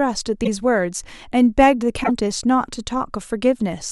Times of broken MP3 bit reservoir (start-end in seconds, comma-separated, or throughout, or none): 0.43-0.48, 2.03-2.10